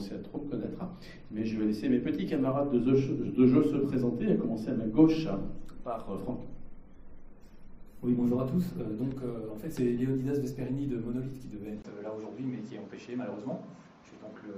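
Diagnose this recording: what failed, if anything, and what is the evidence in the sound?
Driver stage, likely an input switched to a poorer device: a 20 ms gap at 11.82 s, then the spectrogram stops at 7.6 kHz over a faint new noise floor.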